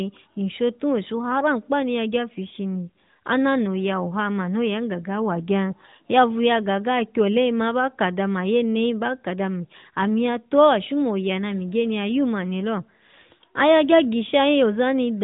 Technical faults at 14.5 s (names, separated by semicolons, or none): none